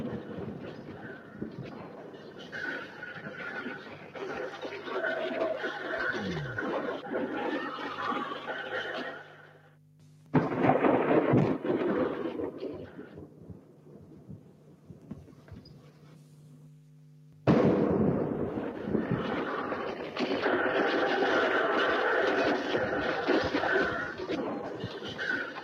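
A noise suppressor designed for speech was left running on this recording of everyday sounds, and it acts for the whole clip. It treats sustained tones, room ambience and decay tails as background noise and pulls them down, while sharp onsets pass largely intact. Its gain keeps shifting by around 10 dB, so the sound pumps and thins as the processor changes its mind about what counts as noise.

The sound is cut by the noise suppressor at several points where steady or fading material is pushed below the surrounding level. The first stretch runs from 0.02 to 2.54 s, with drops of about 6 dB. Shorter dips follow at 2.86 to 3.02 s (about 4 dB) and 3.78 to 4.16 s (about 6 dB). Longer ones come at 9.1 to 10.33 s, 12.87 to 15.1 s and 15.28 to 17.46 s, each about 6 dB, and a final one at 24.63 to 25.04 s (about 5 dB). In each, held sounds sink and decays are clipped short.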